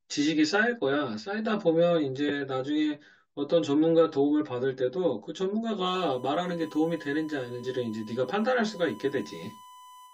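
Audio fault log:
Throughout: channel delay (comb filtering). One channel of the speech arrives roughly 10 ms behind the other, and when the two are summed to mono the shared content cancels at a regular series of frequencies, the first notch sitting around 50 Hz with further notches spaced evenly above it. The result is a hollow, phasey colouring that stays fixed for the whole clip.
5.85 to 10.14 s: USB whine. A steady tone at 1 kHz appears at 5.85 s and continues to the end, sitting about 25 dB below the speech, with its energy concentrated at 1 kHz itself. Its fixed pitch matches the 1 ms frame rate of a USB bus, which points to current drawn by the bus leaking into the audio through the power or ground path of the interface.
7.63 s: damaged data in a compressed stream. A brief blip of under 20 ms breaks into the audio at this point. Part of the compressed data there was corrupted, so the decoder misread the affected frame, lost sync and had to search for the next valid frame header before resuming. 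The short disturbance is the decoder's output from bad data, after which normal playback picks up again.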